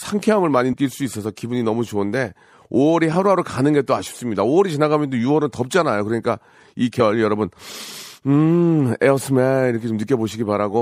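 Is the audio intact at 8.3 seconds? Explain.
No. At 8.3 seconds, as throughout, the speech sounds watery and swirly, with dull treble and chirpy s sounds. The likely cause is MP3 compression near 64 kbps: starved of bits, the encoder cuts the top end and drops quiet frequency components frame to frame.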